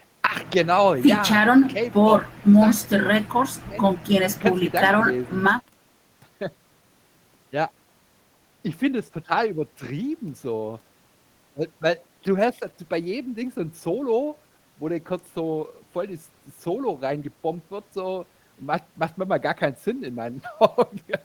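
No technical faults can be heard anywhere in the recording. Nothing in it calls for a timestamp or a closer look.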